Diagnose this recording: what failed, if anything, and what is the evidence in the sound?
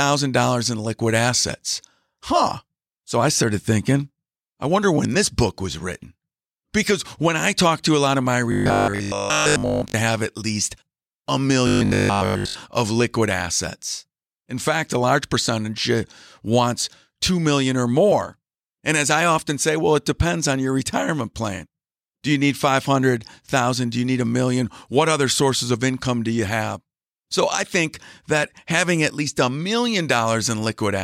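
Robotic sound from repeated short buffers, at the driver or buffer stage: at 8.52–9.94 s and 11.67–12.55 s the speech turns into a metallic 50 Hz buzz still tracking the words. This is likely a 20 ms block replayed while most real audio is skipped. Unlike mains hum, it stops with the speech.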